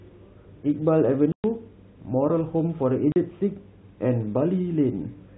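At 1.32 s the speech drops out for 120 ms, then at 3.12 s for 40 ms: packet loss filled with silence. Both lengths fit whole 20 ms packets, and each gap is dead silence with hard edges, not the smeared or repeated sound concealment leaves.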